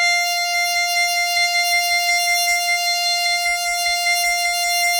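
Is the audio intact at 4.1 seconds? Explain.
Yes, the music at 4.1 seconds plays through intact, with no dropout, glitch or other fault at that moment.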